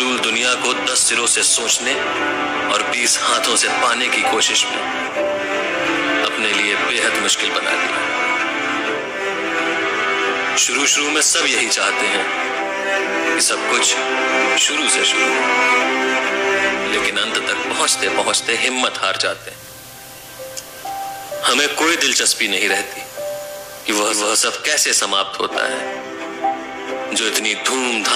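At 19.21 s the receiver loses its digital signal and blends to the FM broadcast over about 0.44 s: hiss rises to around 20 dB below the signal and level shifts about 1 dB. Unlike a dropout, sound continues, returning to digital at 24.38 s.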